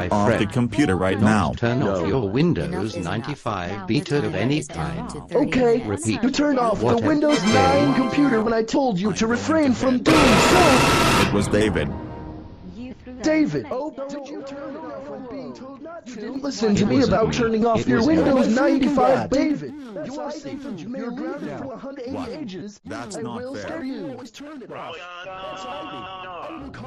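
A ticking, zipping texture rides on the sound from 13.35 to 14.28 s, 16.14 to 16.67 s and 19.30 to 19.71 s. This is zipper noise: the level drops by around 20 dB, rises by about as much, then drops by some 15 dB, each in unsmoothed 3 dB steps roughly seven to ten times a second.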